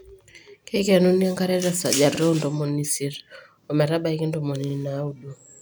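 At 2.15 s and again at 4.70 s, the speech stutters briefly. These are overlapping chunks: each 2.5 s chunk starts early, so 50 ms plays twice at the join.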